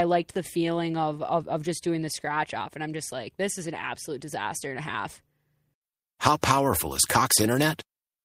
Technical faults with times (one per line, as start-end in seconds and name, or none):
none